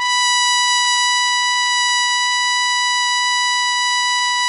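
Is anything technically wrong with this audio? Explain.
Yes. The music shows plainly audible MP3 compression damage throughout. Nothing sounds above 11.3 kHz, which fits a low bitrate around 48 kbps. The encoder likely ran short of bits, cut the treble and dropped weak frequency lines, leaving a watery, swirly sound.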